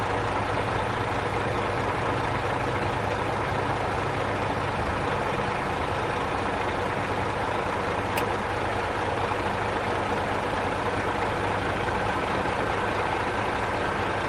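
Nothing in the sound stood out as a technical problem on listening.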